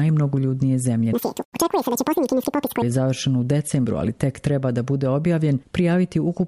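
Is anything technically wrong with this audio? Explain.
Yes. From 1.13 s to 2.82 s the sound abruptly races ahead and jumps up in pitch, becoming thin and chipmunk-like, then drops back to normal. This is a wrong sample rate fault: material captured at a rate that fits 24 kHz is being played out as if it were 48 kHz, with no conversion in between. Every second of audio is consumed twice as fast, so that stretch runs at double speed and sits a full octave, 12 semitones, higher.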